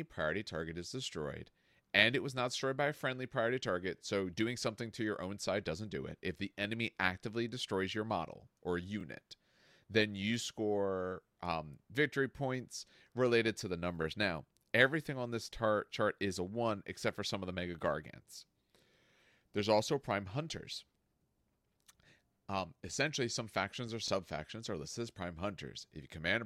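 At 3.98, 9.01, 14.03, 19.06 and 24.08 s, overlapping chunks make the speech stutter: each 5 s block begins 25 ms before the previous one ended, so that slice plays twice. Unlike a dropout, nothing goes missing; the audio briefly repeats, on a steady 5 s beat.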